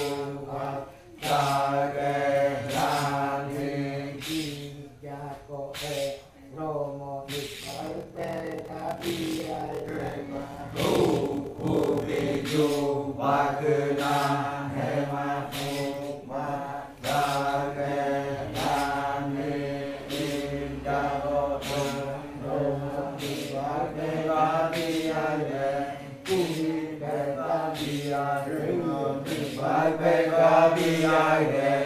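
A block size mismatch (padded) runs from 7.52 to 12.46 s. Zero-filled gaps fit 1024-sample reads. The sound buzzes at 43.1 Hz and plays at 0.861 speed, timbre unchanged.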